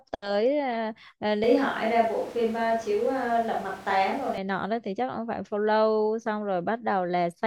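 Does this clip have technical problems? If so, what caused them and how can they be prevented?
Yes. From 1.44 s to 4.38 s the speech turns abruptly roomy and hollow, with thinner bass and a background noise floor that rises to roughly 20 dB below the speech, then snaps back just as suddenly. The likely cause is a switch to a distant microphone when the close one dropped out. Unlike added reverb or an EQ change, the room noise arrives and leaves with the tone shift, while the overall level stays about the same. Monitoring the close microphone's connection and battery during recording would prevent it.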